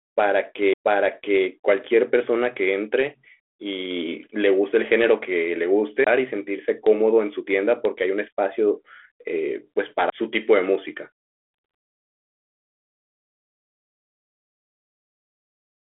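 The laser jumped tracks in a CD skip at 0.73 to 0.76 s, 6.04 to 6.07 s and 10.10 to 10.12 s, each causing a short mute of roughly 30 ms (20 ms for the last) before the speech resumes from a different point, heard through 32 kbit/s G.726 telephone-band audio.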